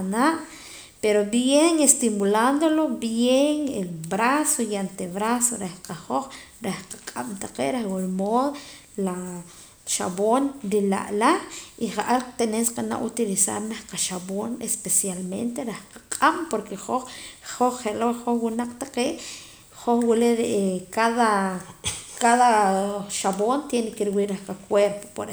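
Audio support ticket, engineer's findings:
Nothing to flag on this one, the speech comes across without any fault I could pick out anywhere in the recording.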